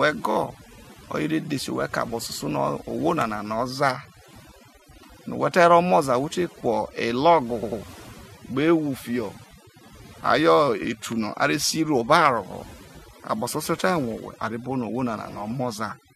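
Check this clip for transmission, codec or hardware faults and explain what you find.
The speech shows three kinds of fault: overdone noise removal across the whole clip, repeated frames in two places, and two loud pops.

The overdone noise removal runs throughout. A noise reducer set too aggressively pulls individual frequency bands down whenever they sit near its noise estimate, taking quiet parts of the voice with them. The background drops and breaks up into twinkling specks.

Repeated frames occur twice. From 0.30 to 0.35 s, a block of about 23.2 ms plays two extra times, adding 46.4 ms. From 7.62 to 7.80 s, a 92.9 ms block, which fits four frames, repeats twice more, adding 185.8 ms. The decoder received the same compressed data again, producing an audible stutter.

Loud pops sit at 3.21 to 3.24 s and 11.12 to 11.14 s. Each is a single sharp pop over the continuing speech. The first is roughly 15 dB above the signal and the second roughly 5 dB. 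The likely cause is a voltage transient from a plug, switch or static discharge, shaped by the following circuitry.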